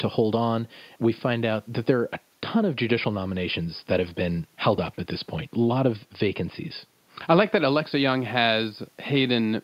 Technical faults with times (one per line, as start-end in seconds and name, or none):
none